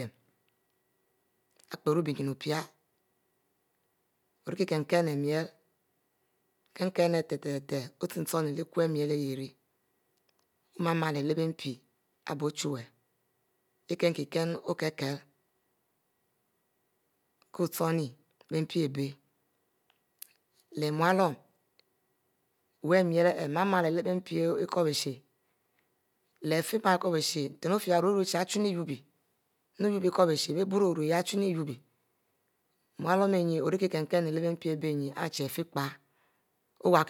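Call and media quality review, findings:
Nothing to flag on this speech recording; no issues turned up on review.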